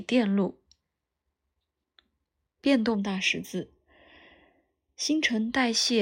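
Channel delay (comb filtering) runs from 2.95 s to 5.52 s. One channel arrives roughly a third of a millisecond behind the other, and when the two are summed to mono, the shared parts of the speech cancel at regularly spaced frequencies. The lowest notch falls around 1.5 kHz, with further notches stacked above it. The voice therefore turns hollow and phasey for that stretch, with a thinned tone.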